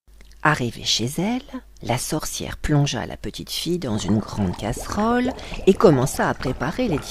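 No technical faults can be heard anywhere in the clip, and the signal holds steady throughout with nothing breaking into it.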